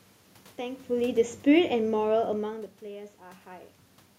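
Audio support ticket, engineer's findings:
Automatic gain falling, 0.9 to 2.51 s. Level of the speech sinks about 5 dB, gradually rather than in a step. AGC stage in the capture chain: input judged too loud or too noisy, gain eased down. Distinct from talker movement (heard near 0.5 and 2.5 s): here the room noise drops together with the speech.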